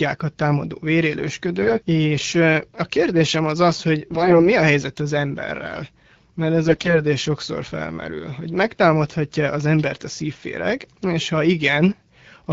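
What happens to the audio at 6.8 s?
From 6.65 to 6.94 s, between "az emberrel mert ez" and "sokszor felmerül hogy megtámadhatja", the speech shows AMR bit errors. A heavy rate of flipped low-priority bits in the AMR-WB frames misplaces excitation pulses and skews fine pitch, gain and spectral parameters, so the speech turns hoarse, scratchy and gargly while roughly keeping its pitch and level.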